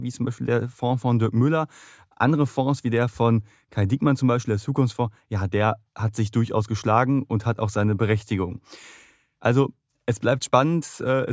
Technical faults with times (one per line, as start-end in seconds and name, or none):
none